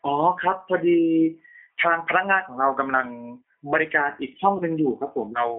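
G.729 codec damage runs throughout: the speech is rebuilt at 8 kbit/s from a filter, pitch predictor and sparse pulses, squeezed into about 200 Hz to 3.5 kHz, sounding plainly rough and synthetic. VoIP packet loss concealed by the speech codec follows at 4.57 to 4.63 s: about 30 ms went missing, which fits a single lost packet, and the decoder stretched its last frame into a fading sound before recovering.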